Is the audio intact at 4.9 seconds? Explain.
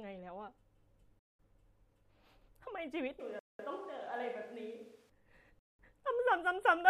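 No. A switch to a distant microphone runs from 3.20 s to 5.10 s, so 4.9 s falls inside it. The close microphone's feed likely dropped out, leaving a pickup further from the talker that captures more of the room. The speech turns suddenly hollow and roomy, thinner in the bass and roughly 5 dB quieter, with background noise sitting only around 30 dB below it. The return to the close sound at 5.10 s is just as abrupt.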